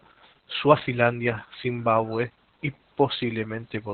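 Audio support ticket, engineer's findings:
Opus voice compression, throughout. Speech muffled, hoarse, slightly robotic, with nothing above 4.3 kHz. Encoder is running narrowband in the SILK linear-prediction mode, with coarse excitation coding. Heavy damage points to about 8 kbps. Probable component: upstream encoder bitrate/bandwidth config.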